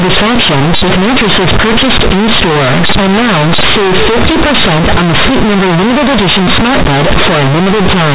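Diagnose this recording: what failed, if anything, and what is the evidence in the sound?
The failure is at the sample-format conversion stage: companded audio read as linear. The speech arrives as mu-law bytes, as G.711 telephone coding normally carries it, but playback treats them as linear 8-bit samples without expanding them. Each sign change then throws the output across about half its range, so quiet passages come out as loud as peaks. From start to finish the sound is a harsh, very loud buzz, and the pauses fill with strong noise. Ordinary clipping or overdrive would only flatten the peaks and leave the gaps quiet.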